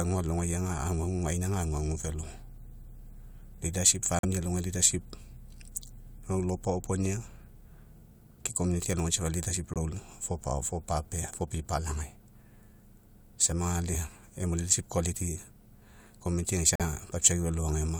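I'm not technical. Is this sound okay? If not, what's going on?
No. The speech has three short silent gaps: 4.19 to 4.25 s, 9.74 to 9.77 s, and 16.76 to 16.81 s. Each is a corrupt frame muted. A small chunk of the compressed audio was damaged, the player couldn't decode it, and it played silence instead. Each hole sounds like about two frames' worth. Unlike a skip or stutter, the sound cuts to nothing abruptly but stays on time. Nothing jumps ahead or repeats.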